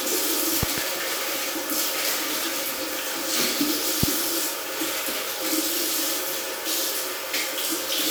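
At 0.63 to 0.80 s, a loud pop arrives as two sharp thumps, and a single stronger one hits at 4.03 to 4.06 s, likely a voltage pulse from a switch or static. The waveform shows tall spikes far above the ongoing sound, and the spectrogram shows thin full-height vertical lines.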